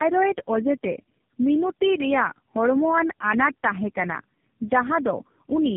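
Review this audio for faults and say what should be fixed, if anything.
Tandem speech coding throughout: the speech is rough, muffled and warbly, with nothing above 3.7 kHz, which points to about three low-rate speech codecs decoding and re-encoding in series. To prevent it, carry the call end to end in one codec, using transcoder-free operation where networks meet.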